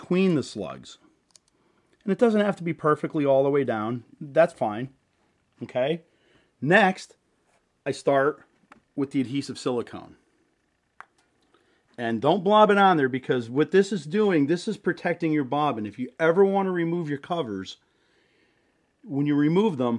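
No technical faults can be heard anywhere in the recording.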